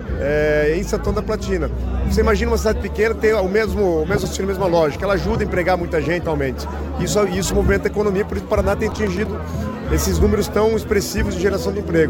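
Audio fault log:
4.23, 6.23 and 8.38 to 8.40 s: compressed frames skipped. At each point the audio jumps forward, dropping about 50 ms, then about 200 ms, then about 70 ms of material. The decoder never played whole frames, either because they were absent or because it rejected them as corrupt. The jumps correspond to roughly 2, 10 and 3 frames of 23.2 ms.
8.91 to 9.27 s: processor overload crackle. For about a third of a second, the processing could not keep up and missed a string of audio-buffer deadlines, roughly seven of them. Each missed buffer, around 3 ms long, came out as a brief hole of silence. The holes have abrupt edges, and together they form a gritty crackle over the sound that stops once the load eases.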